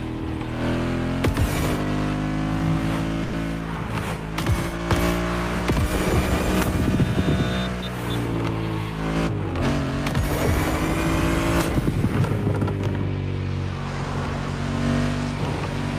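A call audio freeze runs from 3.23 to 3.35 s: the sound stalls and a fading buzz fills about 100 ms, with no silence. The likely cause is delayed packets draining the jitter buffer. Playback then resumes where it stopped, losing nothing but running 100 ms later.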